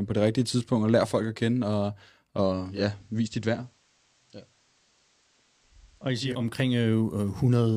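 At 2.46 s, just after "folk at kende og", the digital radio blends to analogue. The receiver lost its digital stream and cross-faded over about 0.4 s to the station's FM broadcast. The sound drops by about 3 dB. A faint hiss rises, sitting well below the speech. At 6.53 s the receiver blends back to digital, and the full level returns.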